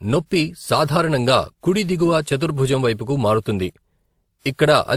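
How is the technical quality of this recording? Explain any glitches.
The technical quality is held back by one problem that runs through the whole recording: the speech sounds like it has gone through more than one lossy codec. The likely cause is transcoding between lossy codecs, with a low-rate Opus-style encode (around 24 kbit/s) re-encoded as WMA at around 96 kbit/s. The higher WMA rate can't restore what the first pass threw away. It spends bits reproducing those older artefacts and adds its own on top, so you hear both kinds layered together. Nothing in the content reaches above about 20.1 kHz.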